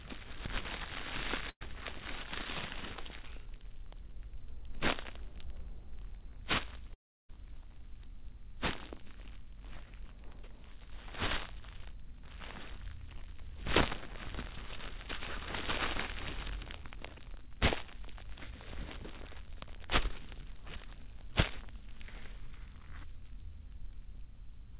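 At 1.49 to 1.62 s, a burst of packet loss drops about 120 ms: the last sound is stretched and fades, then goes silent for about 60 ms before the audio resumes further on.

At 6.94 to 7.30 s, the sound continues briefly, fades, then goes silent for most of the gap, with about 0.35 s missing. That long silent stretch marks it as a likely long network dropout rather than a short burst. Throughout, the call path leaves nothing above 4 kHz.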